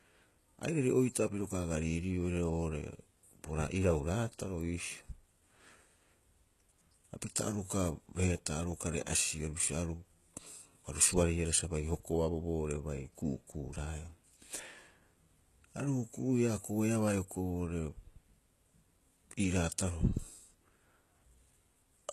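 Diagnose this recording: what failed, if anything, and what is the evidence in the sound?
Throughout the speech the s sounds come out gritty and lispy, and nothing is present above about 12.3 kHz. At the codec stage, this is likely HE-AAC compression at a low bitrate near 16 kbps, where copied-up treble fails to match the real harmonics.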